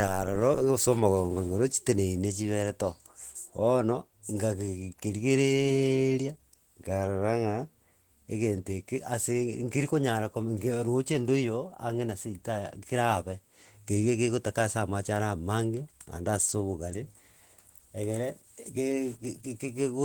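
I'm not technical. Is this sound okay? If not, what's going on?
No. Opus voice compression affects the whole clip. The speech was squeezed hard to save space, so it sounds hoarse and slightly robotic throughout.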